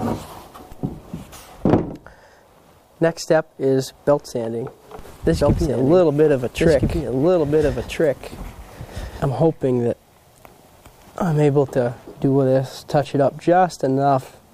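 A doubled audio track runs from 5.41 s to 9.29 s: a second, full-band copy of the sound sits about one and a half seconds behind the original, at roughly the same level. The copy carries no decay or room colouring, and it appears and disappears abruptly at those boundaries. The likely cause is the same signal being captured again through a slower path, or an edit leaving two out-of-step copies stacked.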